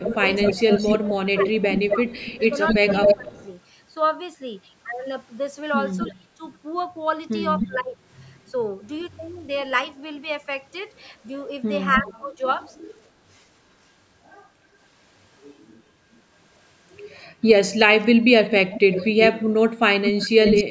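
From 0.0 to 3.36 s the voice dips and breaks up, by up to about 20 dB. This is speech suppressed in double talk. Both sides likely spoke at once, so the echo canceller turned down the near talker too. A delayed copy of the voice runs from 0.05 to 3.45 s, about 5 dB below it. This is echo leak, likely a loudspeaker's sound left in the microphone signal.

The pattern returns at 5.97 to 7.99 s. The voice drops by up to about 25 dB, with echo from 6.02 to 9.2 s, some 274 ms late.

At 11.94 to 12.65 s, echo arrives 294 ms late. Suppression from 12.0 to 12.43 s cuts the voice by up to about 30 dB.

A faint echo, about 40 dB down, appears at 16.13 to 16.19 s. A strong one runs from 18.45 to 20.64 s, 325 ms behind the voice.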